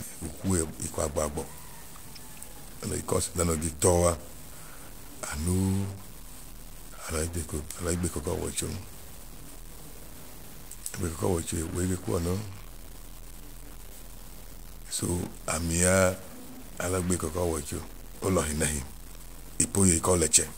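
Speech runs through a harsh, buzzy distortion for its whole length, and the pauses between phrases are filled with a steady hiss rather than falling silent. That pattern points to a stuck bit, likely from a broken data line or converter fault, with one bit fixed so that about half the sample values are shifted by a step of around -40 dBFS. On a waveform, the gaps show a flat band of noise at that level instead of a centred line. A spectrogram shows broadband grit smeared across all frequencies, tracking the speech and never clearing in the quiet stretches.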